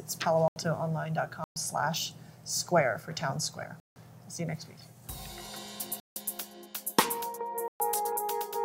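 Blocks of digital silence at 0.48 to 0.56 s, 1.44 to 1.56 s, 3.8 to 3.96 s, 6.0 to 6.16 s and 7.68 to 7.8 s, lasting 80, 120, 160, 160 and 120 ms. In each, a run of samples has been replaced by zeros, so the audio drops abruptly to silence and resumes with no fade. At these lengths each one is heard as a distinct short hole rather than a single tick.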